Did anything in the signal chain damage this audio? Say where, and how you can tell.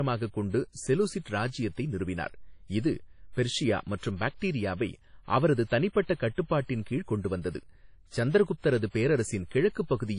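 Yes, the damage happened at the codec stage. For the whole clip the speech has a ringing, washy quality with hiss that swells and fades along with the signal, and nothing is present above 10.1 kHz. This is likely WMA compression at a low bitrate, roughly in the 32 kbps range. Long transform blocks smear quantisation noise, and weak spectral lines are zeroed. A spectrogram would show a hard ceiling at 10.1 kHz and patchy, flickering holes in the upper bands.

A pre-echo occurs from 8.59 to 8.64 s. A short hiss of about 47 ms arrives just before a sharp onset, and the attack itself sounds softened. The codec spread the noise budget meant for the loud attack evenly across its whole transform block, so the quiet gap before the attack also filled with noise. The waveform would show a low fuzzy ramp ahead of the transient instead of a clean jump from silence, and a spectrogram would show a broadband smear of the same width preceding it.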